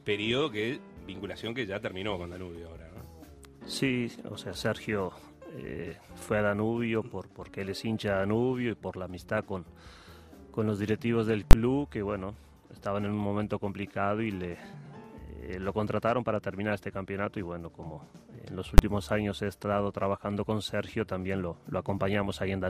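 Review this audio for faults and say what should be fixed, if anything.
Invalid numbers at full scale occur at 11.51 to 11.53 s and at 18.78 s. A calculation returned infinite or invalid values, which were clamped to the largest positive or negative sample value. The output was pinned at one extreme value for 20 ms and then 10 ms, heard as two sharp bangs. To prevent it, check for and replace infinite or invalid values before output, and guard the calculations that can divide by zero or overflow.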